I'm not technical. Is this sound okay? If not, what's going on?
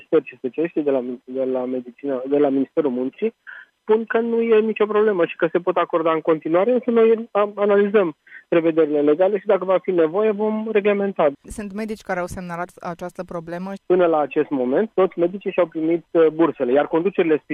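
Yes, nothing stood out as a problem when listening to this.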